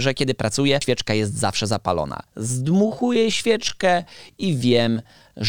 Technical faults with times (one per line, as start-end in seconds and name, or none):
0.81 damaged data in a compressed stream
2.49-5.49 time-stretched section